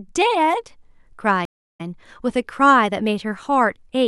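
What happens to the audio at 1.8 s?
At 1.8 s the speech comes back after a stream reconnect that starts at 1.45 s. The connection dropped, the player went quiet for about 313 ms, then reconnected and spun up a fresh decoder partway into the stream. Because playback picks up roughly a fifth of a second further on, a small chunk of speech is simply skipped. The first frame or so comes back muted or fading in, so the return at 1.81 s sounds soft rather than abrupt.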